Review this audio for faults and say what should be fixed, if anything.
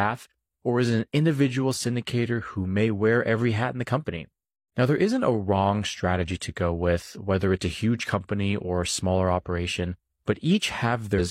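At 11.15 to 11.21 s, near the very end of the speech, a short blip of about 56 ms cuts through the audio. This is damaged data in a compressed stream. Bytes in that stretch of the file were lost or overwritten, so the decoder misread those frames, lost its sync and had to search for the next valid frame header before normal playback resumed. Re-encode from an intact source and check file integrity with a checksum after every transfer.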